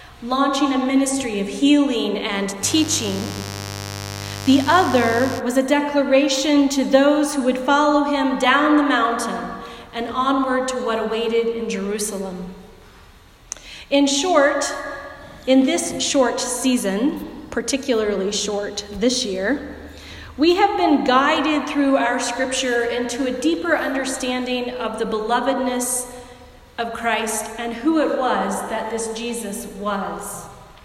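A burst of mains buzz sits under the audio from 2.61 to 5.42 s: a steady, raspy tone built on 50 Hz harmonics reaching into the kilohertz range, roughly 10 dB below the signal, from sharp switching spikes leaking in twice per mains cycle via a dimmer, rectifier or poor shielding.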